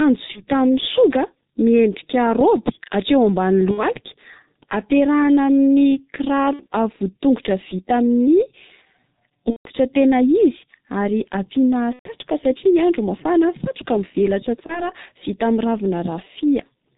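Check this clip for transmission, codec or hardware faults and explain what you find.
Two faults are present in the speech: heavy coding damage throughout, and six short dropouts filled in by the decoder.

G.723.1 codec, throughout the clip: The low-rate telephony coder squeezes the speech into 30 ms frames and models the vocal tract only coarsely, which fits a bitrate near 6.3 kbit/s. Nothing above 4 kHz survives, so the sound is muffled. Because the voice model updates sluggishly, the tone turns hoarse and consonants smear into one another. The damage here is heavy.

VoIP packet loss concealed by the speech codec, at 0.32–0.44, 3.71–3.83, 6.53–6.67, 9.50–9.70, 11.93–12.10 and 14.66–14.92 s: When packets went missing, the decoder kept repeating its last pitch and filter settings while turning the level down frame by frame. Each gap turns into a stretched, buzzy tone or coloured noise that fades away. 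The longest, at 9.50 and 11.93 s, sound like about four or five lost frames. Each decoded frame depends on the one before, so the speech stays weak and distorted for a short time after the stream returns.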